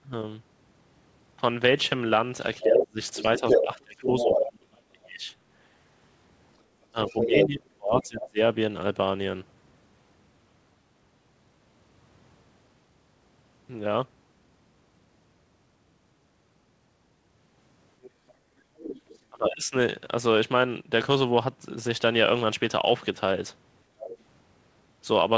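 Other side's voice leaking through this speech clip at 2.6–4.41, 7.07–8.04, 18.02–19.18 and 23.99–24.17 s: a second voice ranges from about 5 dB louder than the talker to about 15 dB below, likely loudspeaker echo the canceller failed to remove. Speech suppressed in double talk at 2.63–5.31, 6.92–8.4 and 19.3–19.74 s: the talker drops by up to about 35 dB while both sides speak, likely because the canceller turned down everything it couldn't separate.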